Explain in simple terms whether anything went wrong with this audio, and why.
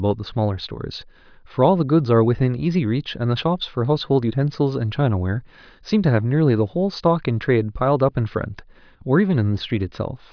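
Nothing went wrong with this one, so there's simply no problem to point to anywhere in the speech.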